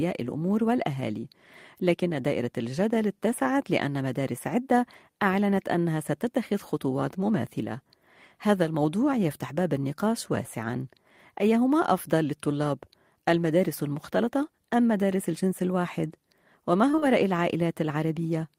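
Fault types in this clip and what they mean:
Short concealed packet loss: three back-to-back 20 ms chunks went missing around 16.91 to 17.04 s, and the decoder papered over them by extending the preceding sound, leaving a brief smear.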